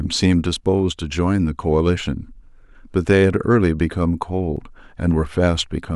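At 0.57 s and 4.57 s the speech jumps ahead, losing around 10 ms and then 20 ms. That's likely a dropped buffer (overrun).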